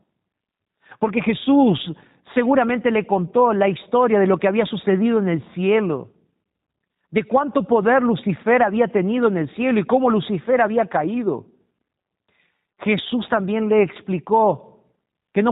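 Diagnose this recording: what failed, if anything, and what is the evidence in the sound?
The codec stage failed: G.729 coding throughout, heard as rough, synthetic speech; a spectrogram shows nothing above 4 kHz, consistent with 8 kbit/s pulse-coded frames.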